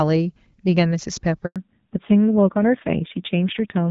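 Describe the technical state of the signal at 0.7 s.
At 0.7 s the speech is intact, with no fault present, just the 7 kHz-limited character of an AMR wideband (HD Voice) connection at about 12.65 kbit/s working as it should.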